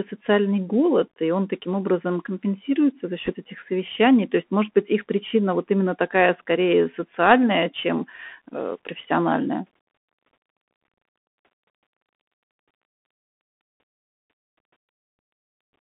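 From start to end, the speech carries the Bluetooth CVSD headset codec, and its damage is plainly audible. The line is band-limited to 200 Hz to 3.4 kHz, which sounds boxy and thin. The codec, which fits a 64 kbps one-bit delta stream, sends only up or down per sample with an adapting step, so sibilants turn scratchy and a grainy hiss sits beneath everything. A spectrogram shows a hard ceiling at 3.4 kHz with speckled noise filling the band.

From 3.25 to 3.33 s come bit errors on a Bluetooth voice link, at a rate of around one percent. Flipped bits in the delta stream each nudge the signal by one step, whose size follows the speech level, and the adaptation soon absorbs them, so there are no sharp clicks, just a brief rushing crackle over the speech. The waveform shows fine, fuzzy jitter instead of spikes, and the spectrogram shows a short smear of broadband noise within the band.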